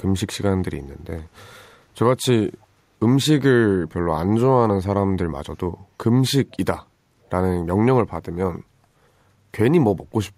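From 2.62 to 2.66 s, a brief echo leak can be heard. A delayed copy of the speech returns about 312 ms late, roughly 40 dB below the main voice. The likely cause is loudspeaker echo on one side of the call that the echo canceller failed to remove.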